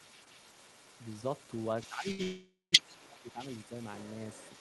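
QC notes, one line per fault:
throughout: other side's voice leaking through, a second voice sits faintly under the speech at about 15 dB down, likely echo the canceller left behind.
1.89–3.39 s: speech suppressed in double talk, the voice dips deeply, around 20 dB at worst, for roughly 0.7 s in pieces, likely the canceller muting both sides.
2.11–2.21 s: short stall from a late packet, a sound is held about 72 ms too long, then resumes intact after the jitter buffer ran empty.
2.23–2.74 s: call audio freeze, the sound hangs as a fading buzz into about 170 ms of silence, a 497 ms gap, likely packets held up, then continues unbroken.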